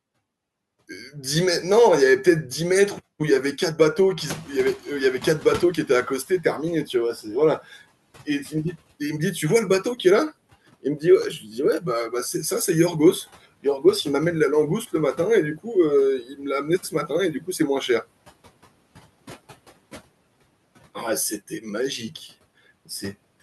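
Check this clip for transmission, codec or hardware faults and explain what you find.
The clip has two kinds of noise suppressor fault rather than transmission, codec or hardware faults.

From 4.17 to 6.34 s there is a noise suppressor catching up: the background noise surges forward, then sinks by about 10 dB over 2.17 s. The room noise jumps about 21 dB near 4 s, and the suppressor's noise estimate takes that long to follow.

At 11.4 to 11.54 s and 16.23 to 16.4 s there is speech cut by the noise suppressor. About a tenth of a second of speech goes faint or swallowed, dipping up to about 7 dB and about 10 dB, because the suppressor mistakes those quiet parts for noise.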